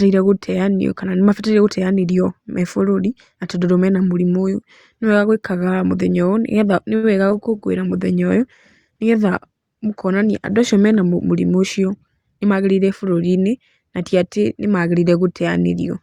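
At 6.95 s a short stall from a late packet holds the speech for about 77 ms, until 7.05 s. The packet arrived late, the jitter buffer ran dry, and the receiver stretched the last sound until the data came. Then it resumed where it had stopped, so nothing is lost, but everything after plays about 77 ms later. A sound is held too long with a slight buzz or dip. On a spectrogram the harmonics run flat and unchanging for that stretch.

Soon after, at 7.29 to 7.32 s, a short concealed packet loss leaves about 20 ms of audio missing. About 10 ms of audio extending the preceding sound fills the hole before the real audio blends back in. It passes as a quick smear or wobble. The spectrogram shows a short stretch where the texture briefly changes.

From 7.34 s to 11.12 s a call bitrate drop takes the encoder from 64 kbps down to 26 kbps, holding the lowest rate for about 3.7 s. The bandwidth estimate fell, and with far fewer bits Opus quantises coarsely. 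The speech turns rough. A spectrogram shows the energy becoming blotchy, then smoothing out once the rate recovers.

Between 11.56 s and 12.53 s a jitter buffer speed-up plays the speech at about 108% of normal pace with unchanged pitch. The buffer had accumulated more delay than its target, so the receiver cut out short pitch-period pieces, about a tenth of a second in total. Delivery sounds slightly hurried. Syllables look compressed along the time axis, while harmonic spacing stays the same.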